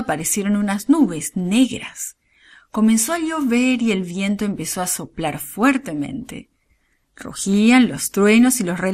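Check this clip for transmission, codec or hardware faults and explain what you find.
Two things stand out: a coded-audio character running through the whole clip, and one short burst of DAB burbling.

MP2 compression, start to finish: the speech sounds dull and plainly gurgly, which is likely MP2. With too few bits at what sounds like about 80 kbps, the encoder drops upper sub-bands and coarsely quantises the rest, so the top end thins out and a granular edge sits on everything.

DAB burbling at 5.67 s: a quick burst of noise blips pops over the speech. Bit errors, at roughly 0.15%, got past error correction into the MP2 data, so wrong samples put short blips of noise into single sub-bands. It sounds like three frames got hit.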